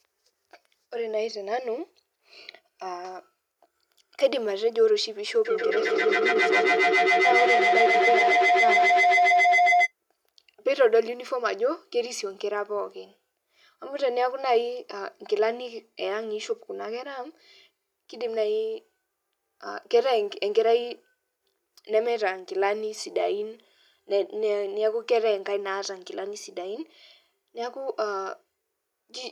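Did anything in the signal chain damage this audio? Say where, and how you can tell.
Yes: a feedback howl runs from 5.45 to 9.93 s, an acoustic loop around the call stage that echo control failed to break. A tone of about 700 Hz swells to about 4 dB above the speech, pulsing roughly every 150 ms. That pulse is the loop's round-trip delay. A second device in the room replays the call aloud, its microphone recaptures it, and each pass gains level until only the favoured frequency survives.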